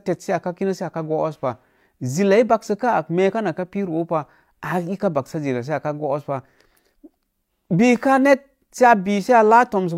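No dropouts, clicks, distortion or level jumps turn up anywhere in the recording; nothing to flag.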